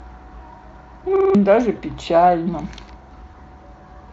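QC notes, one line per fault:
1.16 to 1.35 s, repeated buffer: a 46 ms piece plays four extra times, so the sound stutters with a hard join at each repeat and roughly 0.2 s of audio is lost. This fits a 2048-sample buffer. On a spectrogram it looks like identical blocks in a row, and the waveform shows a vertical step at every join.
1.75 to 1.80 s, VoIP packet loss concealed by the speech codec: one 20 ms frame went missing, and the decoder continued from its last pitch and filter while lowering the gain. The gap becomes a brief buzzy tone or coloured noise that fades out, seen as flat, smeared harmonics with decaying energy.
3.02 to 3.11 s, repeated buffer: a 46 ms piece sounds twice more, giving a shorter stutter with hard joins and about 0.1 s of audio lost. The spectrogram shows duplicated blocks with vertical edges at each seam.
3.31 to 3.36 s, VoIP packet loss concealed by the speech codec: another single 20 ms frame was lost and filled by extrapolation. 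It is heard as a fading buzzy tone or coloured noise across the gap, with frozen harmonic lines that dim and stay weak for a while after real frames return.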